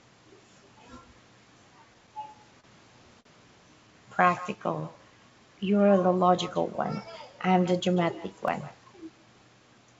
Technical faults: echo with no canceller; repeated stalls (stutter); short stall from a late packet; jitter buffer slow-down; dropped buffer (overrun); jitter buffer speed-up

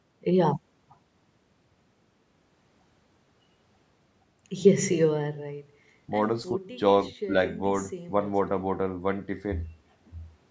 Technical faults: none

